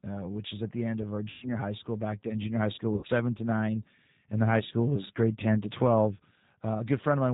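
Throughout, the speech carries G.729 codec damage: nothing above 4 kHz, with a rough, synthetic edge that points to an 8 kbit/s VoIP link. At 1.30 to 1.49 s, after "the end of our", and at 2.95 to 3.07 s, after "high school", VoIP packet loss concealed by the speech codec fills about 120 ms and 80 ms gaps with a fading extrapolation that stays weak briefly afterwards.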